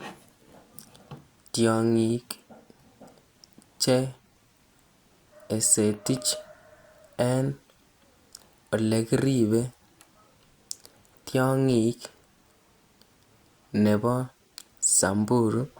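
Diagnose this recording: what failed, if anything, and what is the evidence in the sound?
No stage in the chain shows a failure, and nowhere in the speech recording is there an audible defect to diagnose.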